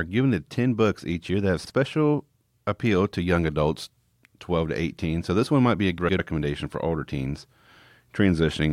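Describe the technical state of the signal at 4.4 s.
At 4.4 s the speech signal is intact, with no audible technical fault at that moment.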